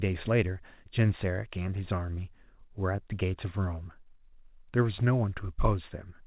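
No technical faults can be heard in this speech; it arrives through a call path whose codec leaves nothing above 4 kHz, which points to a narrowband telephone codec such as 64 kbps G.711 mu-law.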